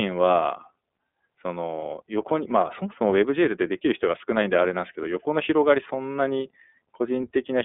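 From start to finish the speech carries iLBC codec damage, and it is plainly audible. The codec codes each 30 ms frame's excitation on its own, without borrowing from the previous frame. That leaves the voice slightly rough and synthetic. The band is telephone-narrow, roughly 250 Hz to 3.5 kHz, with nothing above 3.8 kHz. Sibilants sound dull and thin. The rate points to the 13.33 kbps mode.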